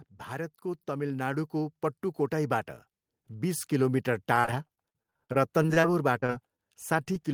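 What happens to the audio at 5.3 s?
Packets kept arriving late or not at all from 4.35 to 5.84 s, a stretch of repeated packet loss (robotic sound). Each hole, the longest about 43 ms, was patched by stretching the preceding sound, leaving choppy speech with fragments missing.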